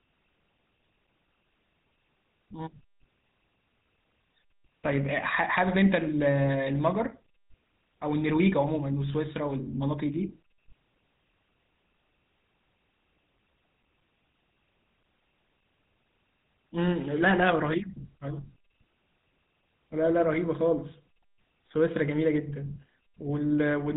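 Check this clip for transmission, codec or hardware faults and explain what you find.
There's one fault here, and it runs the whole length of the speech: GSM full-rate codec damage. The old GSM coder models the vocal tract as a filter and drives it with a coarse, regularly spaced pulse excitation, keeping only a fraction of the detail. That's where the buzzy, gravelly roughness comes from, and it's plainly audible. Nothing gets through above about 3.8 kHz, so the top end is gone, and the overall character fits the 13 kbps full-rate mode.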